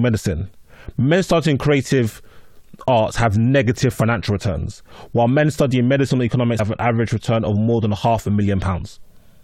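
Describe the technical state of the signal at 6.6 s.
At 6.58 s the speech jumps forward, and around 70 ms of the audio simply never plays. This is compressed frames skipped: whole frames of the encoded stream were either missing or rejected by the decoder as damaged, so playback resumes later.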